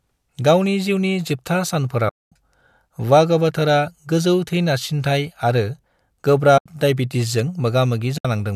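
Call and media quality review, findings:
Soft-edged dropouts in the speech, fading out and back in: 2.09–2.32 s (230 ms), 6.58–6.66 s (80 ms), 8.18–8.25 s (70 ms). AAC frame loss with muting, decoder side: lost frames zeroed, and the overlapping windows taper each gap. Spacing fits roughly 10 ms frames, likely the low-delay AAC (AAC-ELD) stream, whose coding damage is light.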